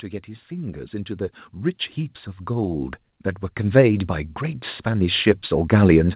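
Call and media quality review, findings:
Level swells twice, with voice and background lifting together: 0.26–1.86 s, up about 6 dB, and 3.56–6.01 s, up about 8 dB. Automatic gain rising. Probable component is the AGC in the send-side microphone chain. It judged the input too quiet and ramped its gain over roughly 1.6 s and 2.5 s, so the noise floor climbs with the voice. The top end stops at 4 kHz, consistent with the G.711 mu-law call path.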